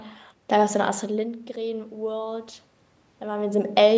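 No technical faults can be heard in this speech recording.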